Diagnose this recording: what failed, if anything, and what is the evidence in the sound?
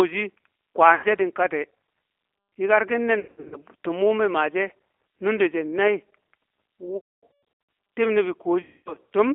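Codec stage: the whole clip is confined to a telephone band of roughly 300 Hz to 3.4 kHz and has the rough, synthetic texture of plainly audible G.729 codec damage. That points to an 8 kbit/s G.729A link rebuilding speech from filter, pitch and sparse pulse parameters.

Network stage: VoIP packet loss concealed by the speech codec occurs at 0.95–1.05 s (just before "she̱ din kati"), 3.20–3.57 s, 6.97–7.23 s and 8.62–8.96 s. In these spans the decoder stretches the last sound into a buzzy tone or coloured noise that fades, with 80, 260, 560 and 240 ms of audio lost in total.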